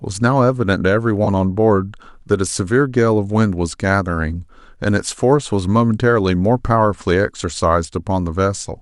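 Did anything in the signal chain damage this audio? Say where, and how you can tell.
Yes. AAC frame loss with concealment is audible from 1.25 to 1.28 s in this speech clip, a break at the codec and network stage. A brief smeared, noisy patch replaces the sound there, lasting about 20 ms, which fits two lost frames. The decoder rebuilt that gap from the last good spectrum with randomised detail, so the patch sounds blurred rather than dropping to silence. The underlying stream is likely low-delay AAC, which leaves only light coding texture.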